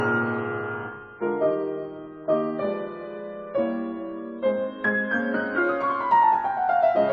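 From the start to 5.63 s the music plays as an adaptive stream starting at a low bitrate: nothing sounds above 7.8 kHz, with stronger codec artefacts, fitting roughly 24 kbit/s AAC. The jump to a fuller version, likely 96 kbit/s, arrives gaplessly, unlike a dropout or reconnect.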